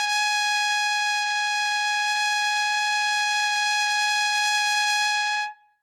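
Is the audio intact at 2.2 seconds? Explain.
No, generation loss runs through the whole clip, including 2.2 s. The music was likely decoded and re-encoded with a lossy codec around five times, fitting Opus at 64 kbit/s, so quantisation noise piles up, leaving a swirly, hollow sound with blurred attacks.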